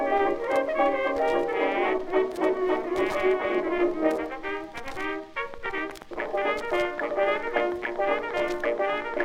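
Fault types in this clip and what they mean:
Train of clicks: a regular series of sharp pulses, about 8.3 per second, runs from 5.54 s to 9.15 s, about thirty in all, each rising about 5 dB above the surrounding sound and heard as steady ticking, including in quieter gaps. On a spectrogram they appear as evenly spaced thin vertical broadband lines; the waveform shows matching narrow spikes. The cause is likely electrical interference or a faulty connection or power supply.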